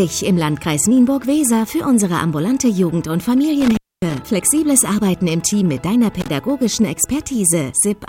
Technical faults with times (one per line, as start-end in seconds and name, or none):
3.60-4.19 intermittent contact
6.20-6.28 intermittent contact